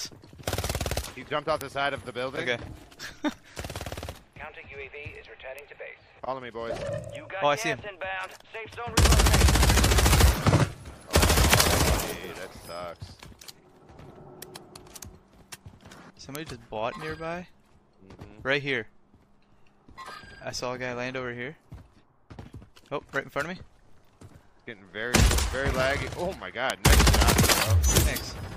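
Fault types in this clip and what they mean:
Bit error spike: a flipped bit jolts one to three samples, giving four ticks; waveform needles up to about -6 dBFS, full-height spectrogram lines.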